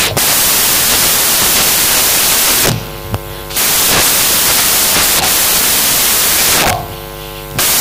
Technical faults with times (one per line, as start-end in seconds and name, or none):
0.00-7.81 samples built from the wrong bytes